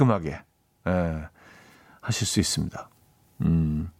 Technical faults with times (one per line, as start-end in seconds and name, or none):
none